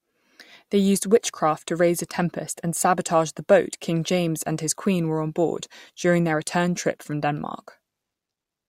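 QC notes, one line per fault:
No fault found in this speech clip.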